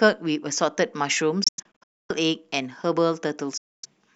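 Packets were likely being dropped on the wireless link before they reached the headphones. That is a Bluetooth dropout. From 1.44 s to 2.11 s the speech breaks into a cluster of silent gaps totalling about 464 ms, the longest lasting 255 ms, with sound flickering back between them. A second dropout runs from 3.57 s to 3.86 s, losing 255 ms. After each gap the speech resumes further along, as though it kept playing during the silence.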